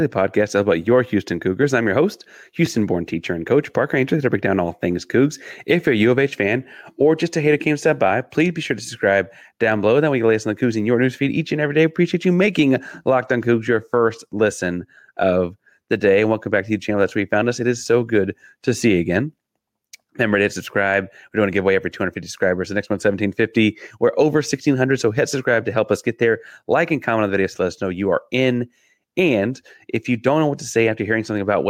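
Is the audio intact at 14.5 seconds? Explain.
No. Gain pumping runs through the whole speech clip, including 14.5 s. The gain swings by about 5 dB, pulling down on each loud sound so loud and soft parts sit closer in level and the speech sounds squashed, likely from excessive gain with a fast limiter.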